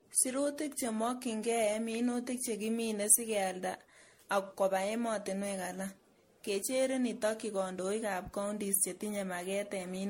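Generation loss runs through the whole of the speech, from start to end. It sounds swirly, smeared and hollow, with blurred consonant attacks and nothing above 16.5 kHz. The likely cause is repeated lossy coding, with the audio decoded and re-encoded around seven times, which fits an MP3 chain at 64 kbit/s. Each new pass quantises on a shifted frame grid, so the noise and spectral holes pile up beyond what one encode would leave.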